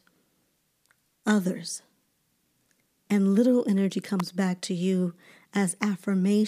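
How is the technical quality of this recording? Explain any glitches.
There's one glitch in the speech, a single electrical switching spike at about 4.20 s. It's a sharp little snap, over in a few milliseconds and peaking fairly high, around -15 dBFS, sitting on top of the talking rather than replacing it. That kind of abrupt transient is most likely from a nearby switch, motor or static discharge throwing a brief arc that the audio line picked up as a burst of interference.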